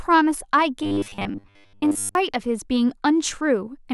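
Speech clip with robotic sound from repeated short buffers between 0.83 and 2.15 s: the voice becomes a rigid metallic buzz at 100 Hz that loosely tracks the words. The cause is likely starved playback looping roughly 10 ms fragments for most of that stretch.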